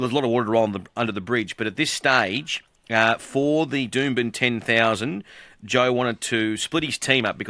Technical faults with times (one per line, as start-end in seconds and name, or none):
none